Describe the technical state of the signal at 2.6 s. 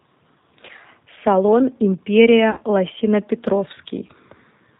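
At 2.6 s the signal is inside a dropout concealed by the speech codec, running from about 2.51 to 2.62 s. Roughly 60 ms of audio never arrived, which fits three lost 20 ms packets. The decoder fills the gap by repeating its last pitch and filter settings at falling gain. The speech smears into a buzzy tone or coloured noise that fades. It stays weak or distorted for tens of milliseconds or more after the stream resumes, because each frame builds on the one before.

Underneath, the whole clip runs through the G.729 codec at 8 kbit/s, and the damage is plainly audible. The codec rebuilds speech from a vocal tract model, a pitch predictor and a handful of pulses per frame. Nothing above 4 kHz survives. The result sounds dull, slightly rough and synthetic. Any background noise takes on a warbling quality.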